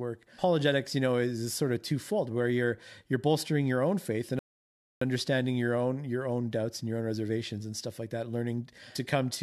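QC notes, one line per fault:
4.39–5.01 s, rebuffering stall: after "your own faith and" the playback drops to silence for about 0.62 s, then continues seamlessly with "understanding your own your". The player exhausted its downloaded buffer and waited for more data, so nothing is lost, but the gap adds time.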